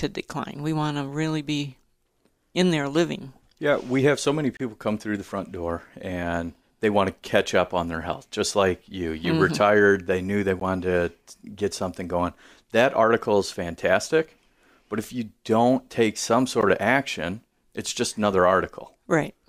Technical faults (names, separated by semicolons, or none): gap at a join of encoded pieces